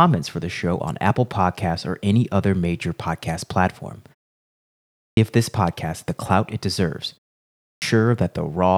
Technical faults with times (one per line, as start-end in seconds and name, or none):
4.81-5.17 clipped start after a pause
7.42-7.82 clipped start after a pause